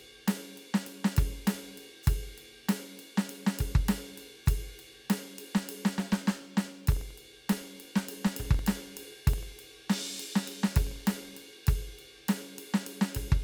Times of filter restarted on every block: 5.57-11.59

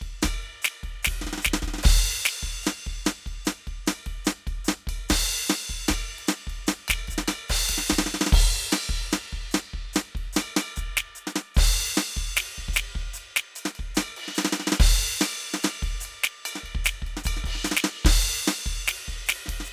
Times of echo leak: none

